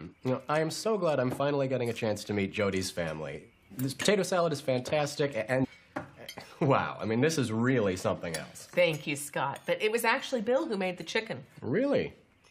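At 5.63 to 5.65 s the audio jumps abruptly ahead with a brief blip. This is a stream segment skipped, likely a failed segment load.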